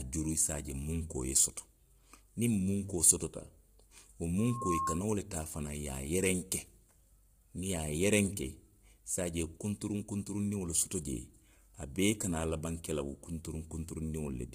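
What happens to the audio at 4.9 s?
A loudspeaker feedback squeal runs from 4.38 to 5.04 s, so at 4.9 s it is near full strength. The microphone is picking up a loudspeaker it feeds, and at 1.1 kHz the loop gain has passed one, so that tone keeps reinforcing itself. It swells over roughly a third of a second into a steady whistle about as loud as the speech, and it is gone by 5.04 s.

Under the squeal, the speech has the rough, grainy texture of heavy low-delay AAC compression, likely AAC-ELD as used for video calls, at a low bitrate in the region of 24 kbps. Its short frames separate the pitch harmonics poorly, so noise fills the gaps between them and the voice loses its smoothness. Nothing is present above 15.6 kHz, and the top band sounds thin and artificial.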